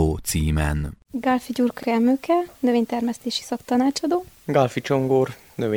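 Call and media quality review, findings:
Overlapping chunks: short stutter/click at 1.83–1.87 s and again at 4.37–4.42 s, roughly 2.5 s apart. Each join replays about 44 ms of sound. Probable component: chunked processing or transport stage. Mechanism: each 2.5 s chunk begins 44 ms before the previous one ends, so the overlap region plays twice at every boundary. The regular spacing points to fixed-size chunks rather than random network loss.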